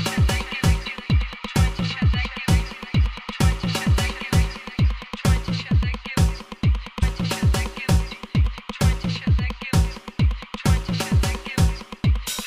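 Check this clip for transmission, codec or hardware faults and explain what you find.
One codec fault: damaged data in a compressed stream, 6.99 to 7.03 s. Corrupted bytes desync the decoder, which hunts for the next frame header, heard as a brief chirp, squawk, click or short hole.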